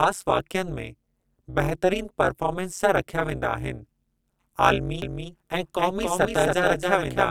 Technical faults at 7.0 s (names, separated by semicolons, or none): overlap-add ripple; doubled audio track